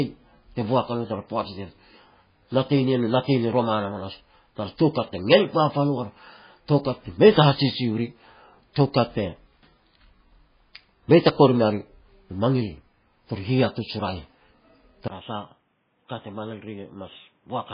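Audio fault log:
Throughout: MP3 compression, likely the cause of the watery, swirly texture with heavy codec damage across the whole clip, which fits a bitrate around 16 kbps. At that rate the encoder keeps zeroing weak frequency lines, so bits of the spectrum flicker on and off frame to frame, s sounds pick up metallic chirps, and attacks smear. There's also a hard ceiling: nothing comes through above 5 kHz, so the top end just stops.
15.08 to 17.74 s: input switched to a poorer device. After a 20 ms silence at 15.08 s the sound turns duller and more boxy, now cut off at 3.8 kHz instead of 5 kHz. It drops roughly 10 dB in level and brings its own background noise, sitting well below the signal. That points to a narrower-band device, likely another mic or a headset call profile, taking over until the end.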